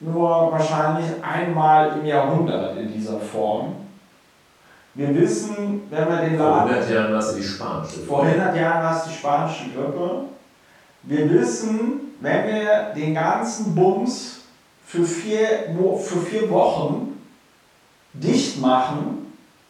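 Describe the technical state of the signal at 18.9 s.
Around 18.9 s the speech signal is intact, with no technical fault present at that moment.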